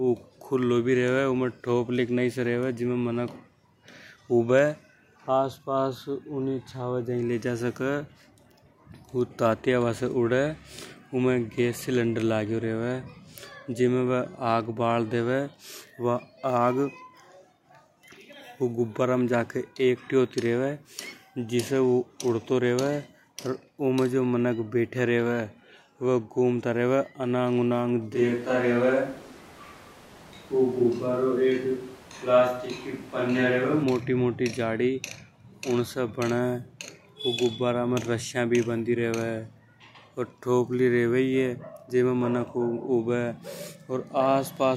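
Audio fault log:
28.16–33.82 s, switch to a distant microphone: the speech abruptly turns roomy and hollow, with thinner bass and background noise around 25 dB below the speech, while loudness barely changes. A farther microphone likely took over. The sudden jump in and out rules out a speaker drifting off-mic.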